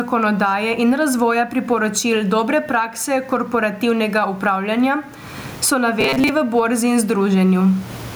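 Throughout the speech, with the room noise sitting about 36 dB below the voice, the level swings by around 20 dB, squashing loud and soft parts closer together. This is gain pumping, likely from excessive input gain driving a fast limiter. From 6.01 to 6.31 s the voice becomes a rigid, metallic buzz near 134 Hz. This is robotic sound from repeated short buffers, likely from roughly 7.5 ms chunks being replayed in place of about half the real audio.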